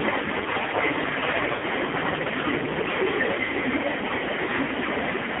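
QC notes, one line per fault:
Throughout, AMR narrowband mobile codec: the sound is squeezed into a telephone band of roughly 250 Hz to 3.5 kHz. Nothing bright survives above that. The low bitrate, consistent with about 5.9 kbps, leaves the speech heavily buzzy and synthetic. Its pitch pulses sound coarse and artificial.
Throughout, microphone overload: the loudest syllables carry a harsh, crackling edge across the whole clip. Peaks sit about 16 dB past the converter's limit, and roughly a fifth of the waveform has its tops sheared flat. Too much input gain is the likely cause.
1.52 to 1.65 s and 3.44 to 3.51 s, lost AMR speech frames: the decoder had no valid data, so it stretched the last good pitch and vocal tract settings while fading them. The first gap lasts about 100 ms and smears into near silence. The second lasts about 40 ms and is drawn out as it fades. Speech returns weak or rough after each.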